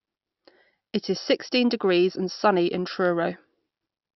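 No technical faults can be heard anywhere in this recording.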